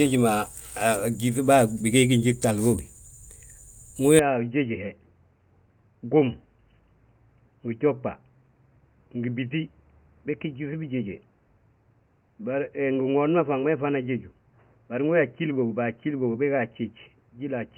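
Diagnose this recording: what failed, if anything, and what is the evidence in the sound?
From 4.19 s the speech turns dull and slightly quieter, with nothing above 3 kHz; the driver likely switched input to a poorer device.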